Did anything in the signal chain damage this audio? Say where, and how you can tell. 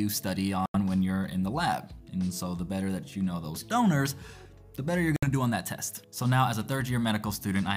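Yes: likely a Bluetooth stall. Delayed packets emptied the playback buffer, which silenced the sound for 85 ms at 0.66 s and for 63 ms at 5.16 s.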